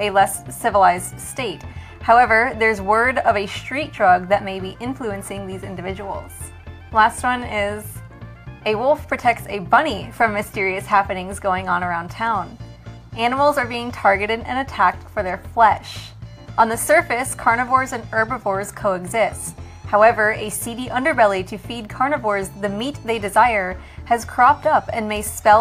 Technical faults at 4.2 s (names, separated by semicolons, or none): none